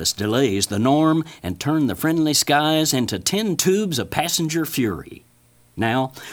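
Nothing technical stands out in this short bit of speech, so there's no fault to point to here.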